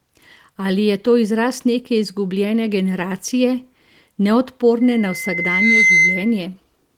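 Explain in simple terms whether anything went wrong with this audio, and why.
Loudspeaker feedback squeal, 4.81 to 6.43 s: the microphone caught its own loudspeaker, so a 2.1 kHz tone swelled over about a second, ending up louder than the speech.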